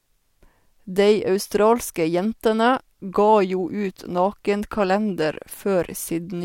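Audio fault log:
No faults are present; there is nothing audible that points to a technical problem.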